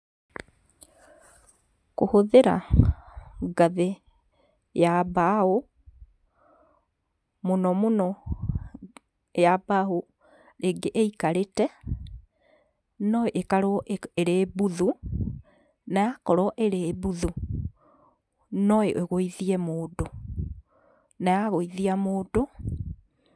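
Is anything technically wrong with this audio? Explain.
No, there is nothing technically wrong with this speech recording. No moment in it shows a fault to point to.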